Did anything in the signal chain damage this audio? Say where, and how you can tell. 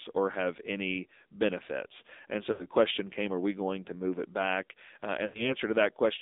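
Yes. At the codec stage, the AMR narrowband mobile codec limits the band to roughly 250 Hz to 3.7 kHz, and its buzzy, synthetic texture fits a low rate near 7.4 kbps. A spectrogram shows a hard ceiling near 3.7 kHz.

In the network, lost AMR speech frames at 2.52–2.66 s (before "question came are we") and 5.26–5.54 s make the sound smear and fade, consistent with about 80 ms of concealed frames. The waveform shows a decaying envelope.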